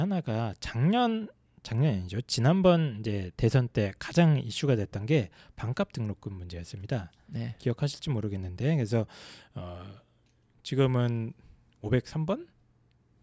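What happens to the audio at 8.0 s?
Nothing goes wrong at 8.0 s: the speech runs through that moment intact, with no dropout, click or other fault.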